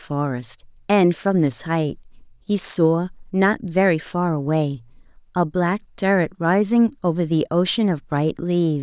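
Speech, with no technical fault to be heard anywhere in the recording. There is no point in it that needs a time or a cause.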